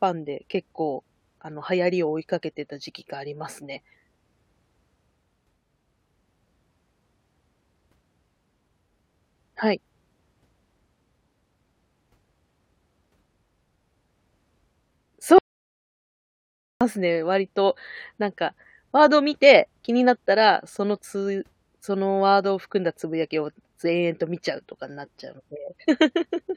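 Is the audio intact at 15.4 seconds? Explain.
No. An audio dropout to silence runs from 15.38 to 16.81 s. The speech cuts out abruptly, leaving dead digital silence with no room tone for about 1.42 s. The input was likely lost while the recording kept writing zeros.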